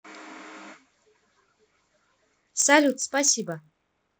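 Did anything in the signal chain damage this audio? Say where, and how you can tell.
Yes. The sample-rate conversion stage restarted its resampler on every block while taking this speech from 16 kHz to 48 kHz. From 2.58 s to the end, each 20 ms block edge gets a small error, heard as a 50 Hz buzz that sounds only under signal.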